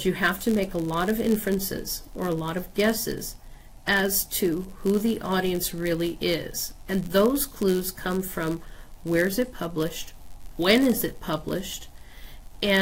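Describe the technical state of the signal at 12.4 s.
At 12.4 s the signal still carries the block size mismatch (padded) that runs through the whole clip. One stage hands over blocks slightly shorter than the next stage expects, and each block's remainder is filled with zeros. Those brief silent gaps repeat at about 91.5 Hz, producing a steady buzz at that rate. The inserted padding also stretches playback to 0.996 times normal speed, while the timbre stays.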